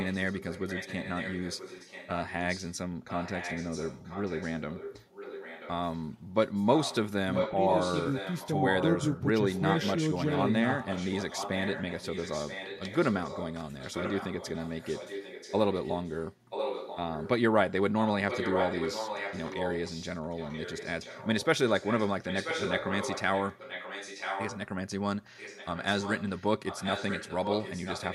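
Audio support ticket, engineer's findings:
Echo leak, 0–2.76, 3.07–6.05, 6.75–6.96, 7.34–9.21, 9.54–17.29, 17.99–24.59 and 25.37–28.14 s. Speech repeats about 0.98 s late, roughly 10 dB down, louder at 7.34–9.21 and 17.99–24.59 s. Likely far-end loudspeaker pickup passing an incomplete echo canceller.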